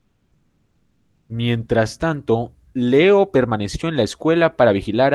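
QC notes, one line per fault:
0.00–1.29 s: comfort noise in place of the background, a steady featureless hiss about 4 dB quieter, likely from discontinuous transmission filling the pause, unlike a real gated background.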